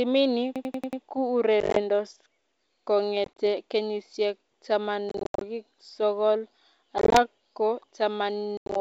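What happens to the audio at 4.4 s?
Nothing goes wrong at 4.4 s: the speech passes intact through its G.722 wideband telephone coding at 64 kbit/s, with at most a faint trace of the codec.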